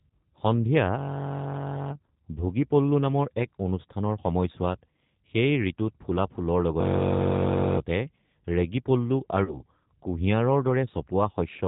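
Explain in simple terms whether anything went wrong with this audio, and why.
Yes, two things went wrong. The call went through the G.729 codec, a phone-network compressor that rebuilds speech from a rough model of the voice and drops everything above 4 kHz. Throughout the clip, speech sounds muffled, slightly rough and a bit synthetic.

Around 9.44 to 9.61 s there is VoIP packet loss concealed by the speech codec. About 40 ms of audio never arrived, which fits two lost packets, and the decoder guessed from the last sound it had. The speech is briefly stretched into a buzzy tone or a coloured noise that fades, then takes a moment to sound right again.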